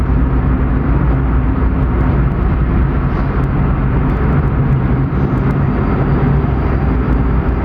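No technical faults are audible anywhere in the sound.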